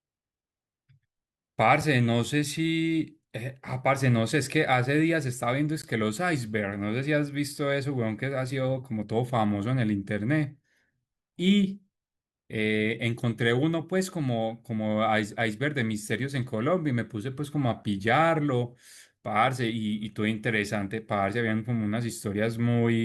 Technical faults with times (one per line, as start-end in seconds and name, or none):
5.82 gap between stream segments
17.83 gap between stream segments